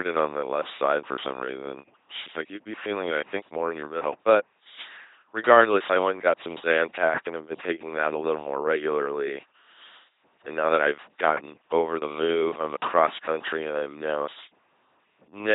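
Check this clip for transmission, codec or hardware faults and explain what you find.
The speech carries one codec fault throughout.

LPC-10 vocoder, across the whole clip: each moment is rebuilt from a ten-pole filter fed by either a pulse train or noise, giving heavy, buzzy robotic speech consistent with a 2.4 kbit/s rate. A spectrogram shows rigid harmonic combs or flat noise, with nothing above 3.8 kHz.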